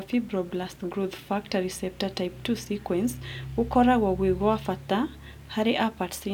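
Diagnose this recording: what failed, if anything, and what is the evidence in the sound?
Nothing in the speech signal points to a failure at any stage, with no disturbance in level, timing or continuity that would mark a problem in the chain.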